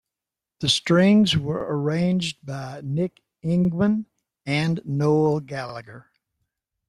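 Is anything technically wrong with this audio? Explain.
Yes, the speech has overlapping chunks: at 1.61–1.65, 3.65–3.69 and 5.69–5.74 s, a 44 ms stretch replays at each 2-second chunk join, causing stutter-clicks, seen as duplicated waveform segments with vertical spectrogram seams.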